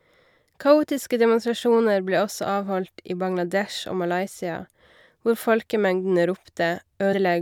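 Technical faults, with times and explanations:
7.12 s, compressed frames skipped: the decoder skipped about two whole compressed frames, either missing from the stream or rejected as damaged. The jump length points to frames of roughly 26 ms, so around 50 ms of the speech never plays and the audio lurches forward near the end of the clip. Because adjacent frames overlap, the join comes out as a short smeared blip rather than a sharp click.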